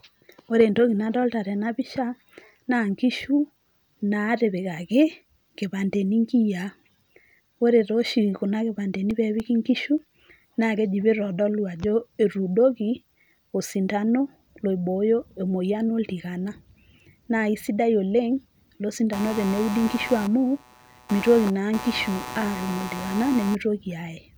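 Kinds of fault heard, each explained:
CD scratch ticks: A blemish on the disc wipes out more data than error correction can restore, once per revolution, so the player patches or mutes the lost samples. Here nine short ticks, the longest only a few milliseconds, run from 7.94 to 10.27 s, ending just before "na keji pitodolu ajo". Their steady spacing, locked to disc rotation, separates them from random clicks of dust or digital glitches, which fall irregularly.
computer activity noise: Changing load in the processor, graphics card or other parts shifts the ground shared with the audio circuit, leaking an electrical buzz into the signal. From 19.13 to 23.55 s a buzzy pulsing at roughly 150 Hz sits about 15 dB below the speech. Unlike steady mains hum, it starts, stops and changes character with what the computer is doing, not with the sound itself.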